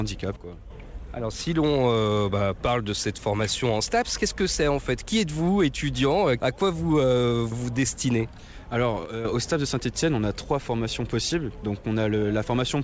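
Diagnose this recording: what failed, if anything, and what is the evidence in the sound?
There are two sudden gain jumps, from 0.36 to 0.70 s and from 9.06 to 9.25 s, where the sound and its background noise both drop about 8 dB in a single step and then come back. That points to the digital gain stage, likely a setting applied with no ramp.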